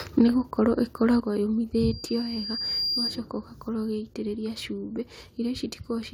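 At 0.18 to 0.21 s the loudest speech peaks flatten with a harsh crackle, likely microphone overload driving the converter about 1 dB past full scale on a small share of samples. The level then drops abruptly at 0.21 s (about 3 dB), 1.2 s (about 6 dB) and 2.22 s (about 3 dB), likely the microphone volume stepped down by the call software. From 1.74 to 3.27 s a loudspeaker feedback squeal at 4.8 kHz swells over roughly a second to sit around 5 dB above the speech, as the speaker-to-microphone loop gain exceeds one at that frequency.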